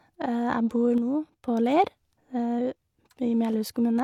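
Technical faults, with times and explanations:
0.98 to 1.48 s, sudden gain jump: the speech and its background noise drop together by about 5 dB in one step, then return just as abruptly half a second later, likely from a digital gain change applied between consecutive samples with no ramp.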